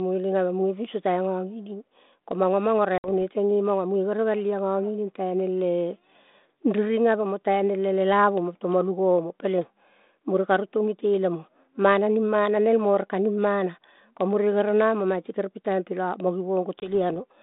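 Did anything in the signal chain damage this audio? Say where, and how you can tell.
Yes, at the network stage: packet loss on an ADPCM call, carried over G.726 at 32 kbit/s. A hard-edged silent hole opens at 2.98 s, after "manga manga" and before "teng nge manga", about 60 ms lost, which fits roughly three packets. Another at 16.80 s, after "la mo", loses about 20 ms, likely one packet. What separates this from a plain buffer dropout is the recovery: the decoder's adaptive predictor and step size restart out of step with the sender's, so sound resumes slightly distorted until they resync, by 3.09 s and 16.94 s respectively.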